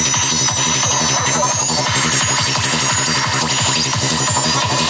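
No faults are audible; the sound has gone through a call's microphone processing, which trims the lowest bass and leaves nothing above 8 kHz, as expected for that path.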